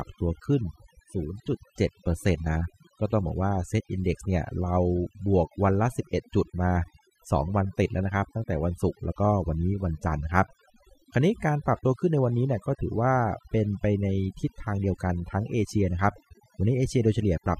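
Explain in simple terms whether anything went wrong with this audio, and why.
Overdone noise removal runs throughout: a cleanup filter set too hard strips quiet parts of the speech, leaving a reduced, twinkling background.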